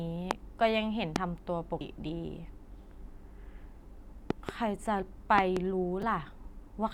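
Speech clip with two kinds of fault. Loud pops strike at 0.31 and 1.16 s, and double pops at 4.30 to 4.51 and 5.38 to 5.59 s, peaking about 20 to 25 dB over the speech. A voltage pulse from a switch or static is the likely cause. Damaged data in a compressed stream gives short blips at 1.81 and 6.02 s, where the decoder loses sync.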